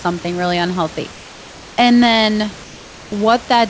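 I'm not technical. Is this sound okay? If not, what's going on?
No. Right after "really unhealthy", from 1.12 to 1.78 s, the call likely stopped sending sound during a pause, and the receiving end filled the gap with comfort noise in place of the background: a flat, even hiss, slightly quieter, standing in for the real room sound.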